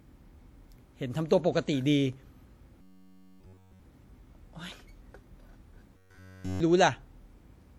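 A low thump at 2.13 s marks a DC step. The waveform's zero line jumps to an offset and holds there to the end, as when a converter recalibrates or an offset input is switched in, while the speech carries on unchanged.

From 2.82 to 3.82 s, and again from 5.97 to 6.60 s, the speech turns into a rigid, metallic buzz at 93.8 Hz, robotic sound from repeated short buffers. The likely cause is audio arriving too seldom, so a stretch of about 10.7 ms is replayed over and over in place of essentially all the real audio, and that repetition rate sets the buzz.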